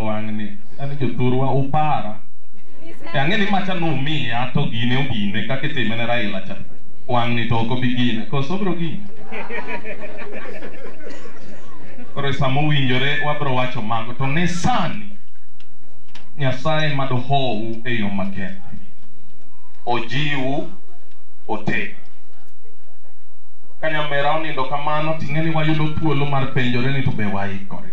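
DC offset runs through the whole clip, from start to finish: the entire waveform sits displaced from zero by a fixed amount of about -13 dBFS. A constant shift like this is inaudible as a tone, but it eats into the available headroom, so peaks on one side of the waveform have less room than they should. On a spectrum it appears as steady energy pinned at 0 Hz, beneath all the audible content.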